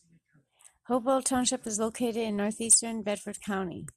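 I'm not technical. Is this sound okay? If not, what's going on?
Yes, this one's fine: there's nothing wrong to hear in this bit of speech, so you can relax about it.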